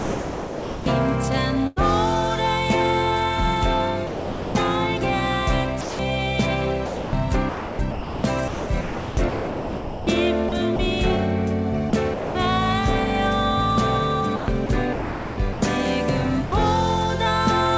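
The audio comes through a call path with nothing above 8 kHz, which fits a G.722 codec at 64 kbps. Sound dropped by the voice detector occurs at 0.00–0.86, 4.07–4.55, 5.81–5.99 and 16.46–16.52 s. Each time, the sound gives way to steady comfort noise, likely because the detector took it for background. A burst of packet loss hits at 1.67–1.81 s. The last sound is held and fades, and about 90 ms of audio is missing. Sound chopped by the voice detector occurs at 6.86–10.79, 11.90–12.35 and 14.36–15.62 s. The sound turns choppy, likely because the detector switches sending on and off and comfort noise fills the gaps.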